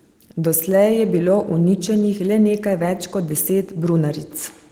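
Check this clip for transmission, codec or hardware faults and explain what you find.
No transmission, codec or hardware faults.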